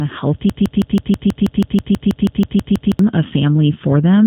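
G.729 codec damage runs through the whole speech clip. A model-based coder rebuilds each short frame from a vocal-tract filter, a pitch predictor and a few pulses, giving the plainly rough, slightly synthetic tone, with nothing above about 3.8 kHz, which fits an 8 kbit/s G.729A link.

A broken-record loop runs from 0.50 s to 2.99 s: a 0.16 s fragment repeats exactly, back to back, 15 times, likely because the stream stalled and kept resending its last buffered piece, so the audio due in those 2.5 seconds is lost.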